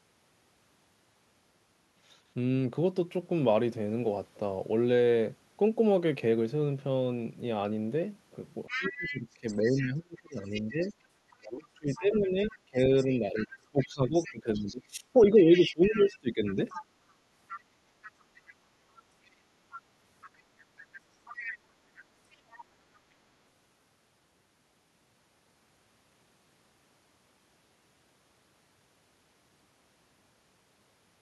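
From 8.67 s a faint second voice sits under the talker: the other side's voice leaking through, likely loudspeaker echo the canceller missed. It comes back at 10.51, 17.49, 19.26, 20.95 and 22.5 s, always well below the talker and faintest at 22.5 s. Between 8.76 and 16.78 s the talker keeps dipping, sometimes by about 25 dB. That's speech suppressed in double talk, likely the canceller turning everything down while both sides talk.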